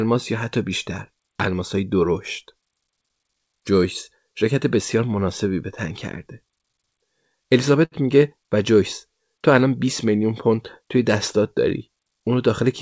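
At 7.85 s a short stall from a late packet holds the speech for about 68 ms, stretching one sound with a slight buzz or dip before resuming without loss. From 12.11 to 12.62 s a jitter buffer speed-up trims pitch periods, running about 6% faster at unchanged pitch and dropping roughly 40 ms.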